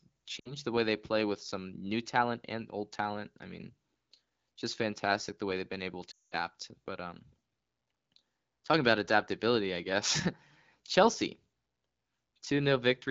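Right at the start, from 0.40 to 0.52 s, there's a short patch of lost AMR speech frames, just before "the way they play". The decoder papers over about 60 ms, which fits three dropped frames, by reusing its last pitch and vocal tract settings with falling gain. The sound drops to near silence within two frames. At 6.11 to 6.35 s, after "way they've been able", the gap is much longer, and the sound drops to near silence within two frames, then returns weak or rough over the light wideband codec texture.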